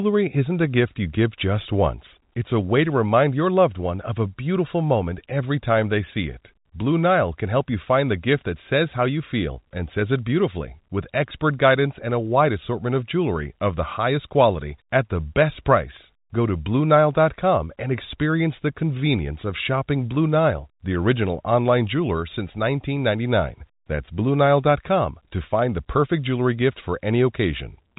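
Nothing goes wrong anywhere in this speech recording.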